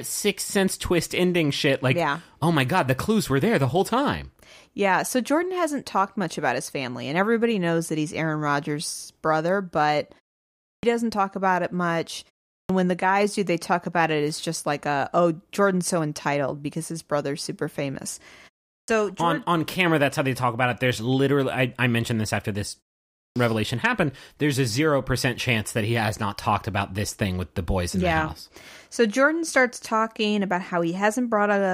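At 10.73, 12.59, 18.77 and 23.26 s, speech resumes with a clipped start after a pause. Each time, the output has gone idle and wakes late, losing about 100 ms. After "brother but", after "his brother's super famous" and before "happened there's a", words begin abruptly, missing their opening sounds.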